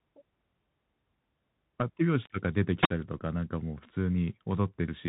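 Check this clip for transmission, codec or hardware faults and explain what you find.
Several faults are audible: a band-limited codec throughout, two single-sample clicks, one radio dropout and one packet repeat.

Throughout, the sound carries the Bluetooth CVSD headset codec, plainly audible and consistent with a 64 kbit/s link. The one-bit delta modulator's adaptive step can't follow fast, loud high-frequency movement, so loud high sounds distort; nothing above 4 kHz survives, sibilants turn scratchy, and a granular hiss sits under the speech.

At 2.26 s and again at 3.43 s there is a bit error spike, each one sample long. A single flipped bit throws that sample off by a power of two before the waveform returns, producing a sharp, broadband tick with no relation to the surrounding speech.

From 2.81 s to 2.90 s there is a wireless microphone squelch dropout. The FM signal fades, hiss rises briefly, then the receiver's squelch mutes the output for about 52 ms. 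The result is a near-silent hole before the speech comes back.

At 3.19 s a Bluetooth headset packet repeated covers about 15 ms, which fits roughly four lost 3.75 ms packets. The chip re-decodes the last good packet's bits instead of new ones, giving a short buzz near 267 Hz before normal packets resume.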